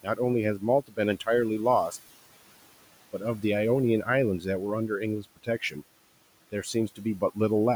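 Throughout the clip, noise suppressor artifacts are present: the room noise, sitting about 19 dB below the speech, is pulled down by about 18 dB in the gaps and lifts back under each phrase.

At 0.82 to 0.99 s, 5.22 to 5.76 s and 6.52 to 7.37 s, speech is cut by the noise suppressor: quieter speech was classed as noise and dropped by up to about 16 to 18 dB, so short stretches of roughly 150 to 200 milliseconds each sound swallowed and faint.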